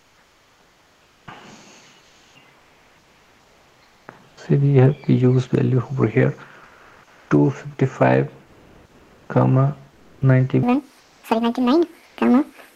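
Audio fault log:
0.0 to 12.15 s, comfort noise in place of the background, at 0.0–1.27, 2.03–4.07, 6.63–7.27, 8.47–9.27, 9.91–10.19, 10.99–11.23 and 12.07–12.15 s: the real background, about 40 dB below the loudest sound, gives way to steady featureless hiss that steps up or down by a few dB. Likely discontinuous transmission filling pauses with synthetic noise.
1.25 s, onset clipped by the voice detector: about 20 ms of the returning sound is missing, so it starts abruptly. The voice detector was likely slow to reopen.
10.63 s to the end, section at the wrong speed: playback runs 1.84 times too fast, raising pitch by about ten semitones and making everything hurried and high, likely from a mismatched clock.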